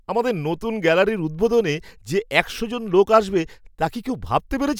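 Nothing in this speech recording stood out as a technical problem on listening.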